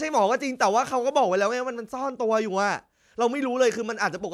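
A speech recording, with nothing technically wrong with it.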